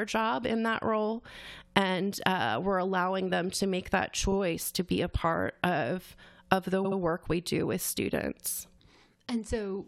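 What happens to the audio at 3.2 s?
Nothing goes wrong at 3.2 s; the speech carries on intact through that moment with no dropout, click or distortion.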